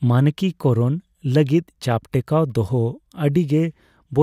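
No technical faults occur anywhere in the speech, so there is nothing to describe in time order.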